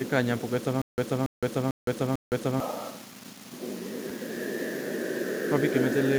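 From 0.82 s to 2.60 s the speech falls into a stutter with silent gaps: a 282 ms fragment repeats four times, each followed by about 164 ms of dead silence, a 446 ms cycle. This is likely a stalled stream replaying its last buffer, so the intervening audio is lost.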